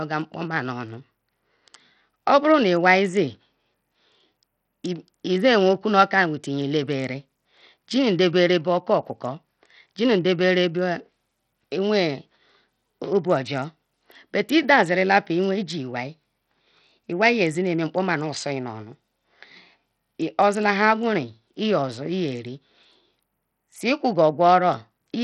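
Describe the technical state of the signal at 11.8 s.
At 11.8 s the speech carries the same damage heard across the whole clip. It is likely Bluetooth SBC compression. Nothing is heard above about 14.4 kHz. The treble flickers and thins. A gritty, grainy noise clings to the sound, with aliasing. The damage is heavy, which points to a low bitrate near 64 kbps. At that rate the codec starves its upper sub-bands of bits and quantises the rest coarsely.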